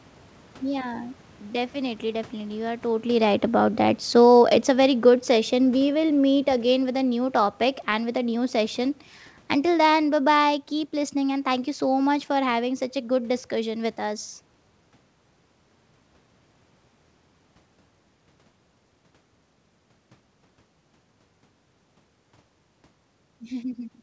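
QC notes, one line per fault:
3.54–7.64 s, automatic gain falling: after "are totally right" the speech and the room noise behind it sink together by about 7 dB, easing down until "and with a new", because the gain control judged the input too loud or its background noise too strong and gradually lowered its gain.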